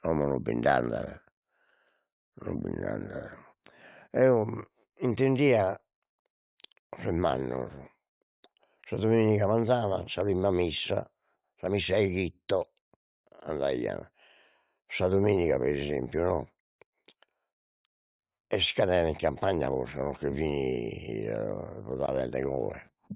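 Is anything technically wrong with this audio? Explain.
No, nothing is technically wrong with this audio.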